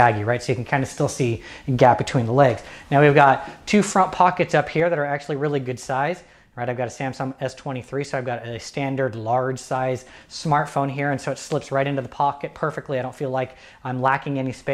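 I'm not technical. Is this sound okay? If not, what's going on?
No. At about 4.8 seconds the whole recording suddenly gets quieter, and it stays at that lower level until the end. The background noise drops at the same moment as the main sound. That is a sudden gain jump, a volume setting changed in one instant instead of being eased in gradually. Most likely a digital level adjustment was applied abruptly during processing, so everything after that point simply plays back lower.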